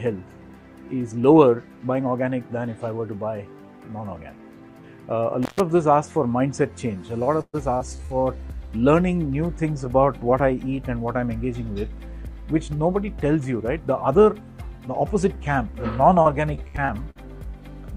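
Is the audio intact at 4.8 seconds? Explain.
Yes, the audio is intact at 4.8 seconds, with no dropout, click, distortion or other technical fault audible at that point.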